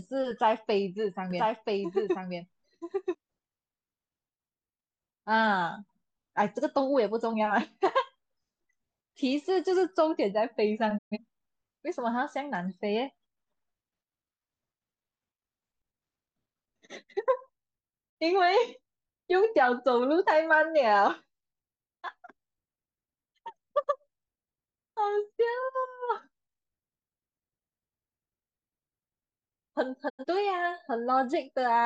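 From 1.31 to 3.15 s there's a doubled audio track: the speech repeats about a second late, roughly 5 dB down, dry and abrupt, likely from a second, slower capture path. Then digital broadcast dropouts at 10.97, 18.09 and 30.08 s: the receiver mutes after a quick 20 ms fade, losing about 128, 43 and 85 ms of sound.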